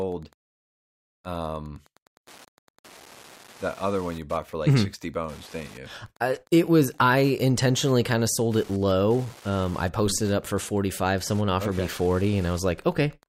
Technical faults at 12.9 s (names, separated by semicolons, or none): Wi-Fi interference